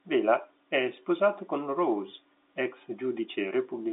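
Nothing goes wrong anywhere here; it's just speech carried over an ordinary G.711 A-law telephone line, so everything sits in the narrow phone band of roughly 300 Hz to 3.7 kHz with nothing coming through above about 3.8 kHz.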